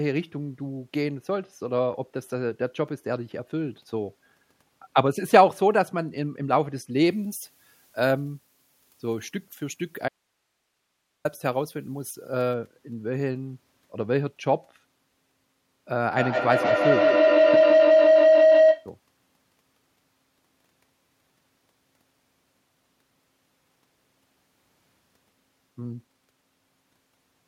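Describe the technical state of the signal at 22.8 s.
At 22.8 s the speech signal is intact, with no audible fault at that moment.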